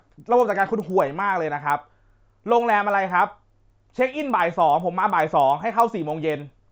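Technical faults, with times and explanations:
Throughout: resampler restarted on every block. The speech sounds like it's been converted from 16 kHz to 48 kHz in 100 ms chunks, each one handled fresh with no memory of its neighbours. At every chunk edge the converter's filter is missing the samples on either side, so it gets those few wrong. That leaves a steady tick about ten times a second, riding on the talking and dropping out in the gaps.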